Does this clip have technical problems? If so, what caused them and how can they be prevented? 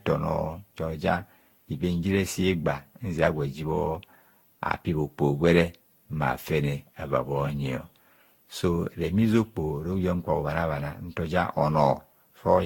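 Yes, generation loss throughout: swirly, hollow speech with smeared attacks and nothing above 19.2 kHz, likely from roughly ten passes through a lossy codec around 70 kbit/s. Prevent it by keeping a lossless master and encoding only once.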